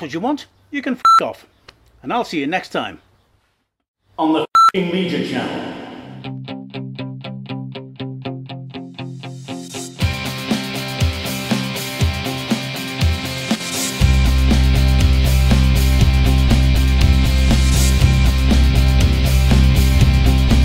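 At 13.55 to 13.60 s the sound abruptly drops by about 6 dB for 50 ms and then snaps back, likely one channel dropping out before the mono sum. Unlike a full dropout, it never falls to silence, and the level change is instant rather than faded.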